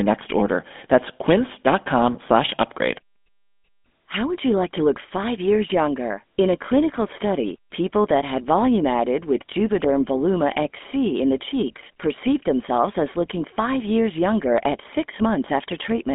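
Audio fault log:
Throughout: GSM full-rate codec. The speech carries a buzzy, gravelly roughness from a vocal-tract model driven by regularly spaced pulses. The band is cut near 200 Hz to 3.5 kHz, with nothing above 3.8 kHz. The plain pulse-driven grit, rather than the smeared warble of later low-rate codecs, points to GSM full rate at about 13 kbps.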